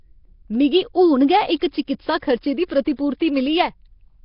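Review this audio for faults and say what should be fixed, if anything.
Across the whole clip the speech has a rough, hissy halo and a smeared, underwater colour, and nothing survives above 5.3 kHz. This is likely Nellymoser compression: the codec spends a fixed two bits per sample on 256-sample blocks, so weak bands get no bits and are refilled with noise. The heavy damage fits a rate around 22 kbps. On a spectrogram, expect a hard ceiling at 5.3 kHz and grainy, speckled noise patches where harmonics should be. Prevent it by recording or exporting with a modern codec at a higher bitrate.

Pre-echo smears four attacks: 1.59–1.62 s, just after "मिगी हून गै" and before "चकित्सा खर्चे दी"; 2.20–2.22 s, just before "खर्चे दी"; 2.85 s; and 2.96–2.99 s, right after "चकित्सा खर्चे दी". Each lasts 12 to 24 ms. The codec spreads quantisation noise, sized for the loud onset, across the whole block, so it fills the quiet moment before the onset. 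A waveform shows a fuzzy noise ramp ahead of each transient, and a spectrogram shows a vertical smear. Prevent it with a codec that switches to short blocks on transients.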